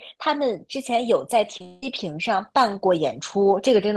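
At 1.57 to 1.61 s and again at 1.62 to 1.66 s there is short concealed packet loss. About 30 ms of speech goes missing each time. The receiver patches each gap by extending the preceding sound, giving two quick smears.

From 1.66 to 1.83 s, the speech is replaced by a stretched, fading continuation of the last sound for about 0.16 s, with no silence. It then resumes. This is likely a long network dropout, with that section never played.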